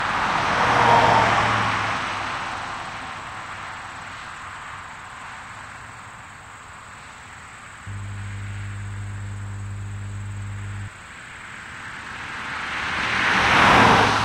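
From 7.87 to 10.88 s, mains hum appears: a ground loop or nearby transformer is coupling the 50 Hz power line into the signal path. It is heard as a steady low tone at 50 Hz, roughly 10 dB below the sound.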